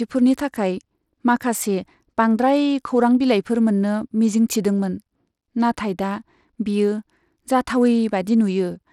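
Throughout the speech, the treble flickers and thins, a gritty, grainy noise rides on the upper range, and nothing sounds above 17.2 kHz. This is plainly audible Bluetooth SBC compression, likely from a starved bit pool, which fits a link running near 96 kbps.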